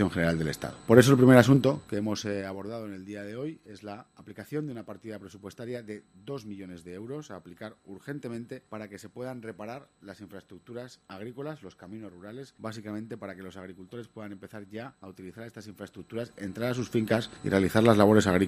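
From 1.49 to 2.77 s the level falls by roughly 20 dB in 2 dB jumps, and from 15.74 to 17.20 s it rises the same way. This is zipper noise: unsmoothed gain steps, about seven a second, each ticking. The waveform envelope forms a staircase, and the spectrogram shows faint vertical lines at each step.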